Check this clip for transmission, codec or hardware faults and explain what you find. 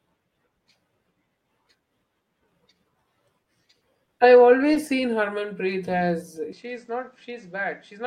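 Two problems show up, one in the middle of the clip and one at the end.

Between 3.43 and 4.89 s there are scattered short gaps: about five tiny dropouts, none longer than about 20 ms. Lost or late packets left holes that the receiver papered over by stretching the preceding sound, so you hear brief ticks and smears in otherwise clear speech.

From 6.53 s to the end, the sound abruptly goes duller. Nothing gets through above 8.4 kHz, the level falls by about 5 dB, and a new noise floor sits about 35 dB under the voice. There's no silence at the change. The likely cause is the input switching to a poorer device with a narrower band.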